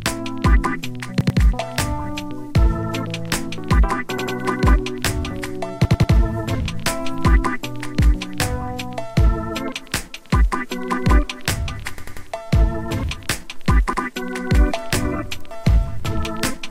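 Repeated buffer at 1.21, 4.18, 5.85, 11.98 and 13.93 s: late data made a 93 ms block (fitting 4096 samples) replay one to three times, a stutter seen as identical hard-edged spectrogram slices.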